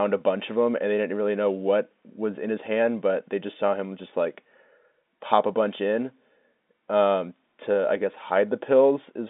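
No technical faults can be heard in this speech, which comes through a normal telephone-band line.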